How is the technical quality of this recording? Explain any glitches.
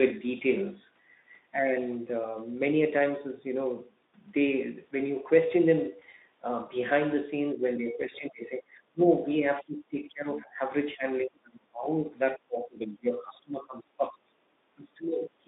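The recording has two kinds of fault: one short packet-loss gap and a run of repeated level drops in the second half. It comes through a narrowband Speex-coded line limited to about 200 Hz to 3.7 kHz.

VoIP packet loss concealed by the speech codec occurs at 5.99–6.02 s. One roughly 20 ms frame was lost, and the decoder filled it by extrapolating the previous pitch and filter. It sounds like a brief stretched smear that fades. A spectrogram shows a flattened, repeated harmonic slice there.

Speech suppressed in double talk, likely caused by the echo canceller ducking the talker while the far side spoke, occurs at 7.52–8.75, 8.93–9.01, 9.21–9.45, 9.62–10.61, 10.85–11.08, 11.24–12.06, 12.36–14.29 and 14.75–15.47 s. The speech dips by about 10 to 30 dB, and the waveform's envelope sags in chunks.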